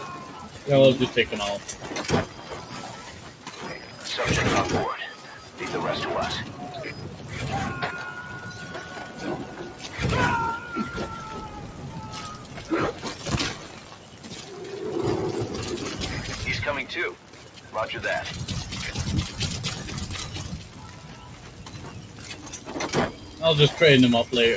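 All the way through, a noise suppressor meant for speech is treating this material as noise, so level swings by around 10 dB as held parts and tails get pulled down while attacks slip through, giving a pumping, thinned-out feel. The band stops at 8 kHz, as expected for call microphone processing. The suppressor cuts specific stretches harder at 2.29–2.46 s (about 4 dB), then 3.09–3.47, 5.16–5.6, 12.38–12.57, 13.66–14.26, 17.15–17.74, 20.63–22.67 and 23.15–23.41 s (about 5 dB each). Steady or decaying sound sinks there and tails get clipped short.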